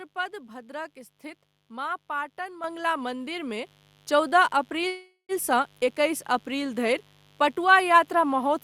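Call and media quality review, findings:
Mains buzz, throughout. Steady raspy buzz under the speech, roughly 35 dB below it. Harmonic series on a 50 Hz base. Probable component: unshielded or dimmer-adjacent analogue path. Switching spikes twice per mains cycle put harmonics up into the kilohertz range.

Microphone volume stepped up, 2.64 s and 3.66 s. First step comes right after "भद्रक स्थित माँ पाटन", about 8 dB. Second step is about 5 dB. Voice and background rise together. Component: call software input-gain control. It found the microphone too quiet and raised device gain in single steps.

Call audio freeze, 4.87 to 5.32 s. Last sound is continued and fades, ending in about 90 ms of silence. Speech then resumes where it stopped. Nothing lost, but about 415 ms is inserted and delay grows by that much. Likely cause: held-up packets draining the jitter buffer.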